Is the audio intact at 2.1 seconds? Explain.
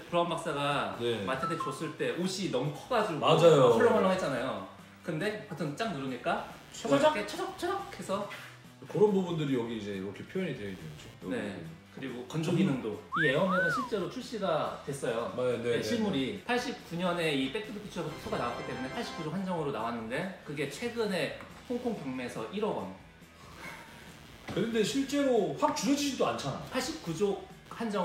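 No. Computer activity noise runs through the whole clip, including 2.1 s: processor or graphics load shifts the shared ground, adding buzzing at around 100 Hz, roughly 30 dB below the sound. On a spectrogram this shows as faint harmonic lines that do not follow the sound.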